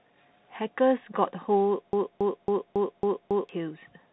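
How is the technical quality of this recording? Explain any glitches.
The recording has two clear faults: narrowband Bluetooth headset coding across the whole clip and a stuck repeating fragment in the middle.

Bluetooth CVSD headset codec, throughout: the speech has passed through the one-bit-per-sample delta coder used by Bluetooth headsets, which fits the 64 kbps CVSD link. Each bit only nudges the waveform up or down by an adapting step, so loud, fast-changing sounds outrun it. Nothing above about 3.9 kHz survives, s sounds come out scratchy, and a fine granular hiss sits under the voice.

Broken-record loop, from 1.93 s to 3.49 s: a fragment about 0.28 s long repeats six times back to back, identical each time. The likely cause is a stalled player, encoder or stream that kept resending the last chunk it held. Whatever speech should have played during those one and a half seconds is missing, replaced by the stutter.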